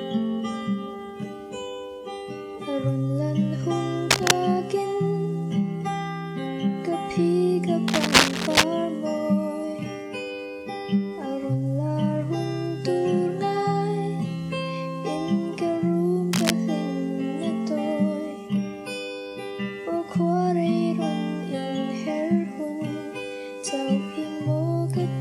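Cable scratch noise at 4.10–4.32 s, 7.88–8.64 s and 16.31–16.50 s: dense, ragged scratching bursts, louder than the sound in the first two and about level with it in the third, likely from a worn connector being moved.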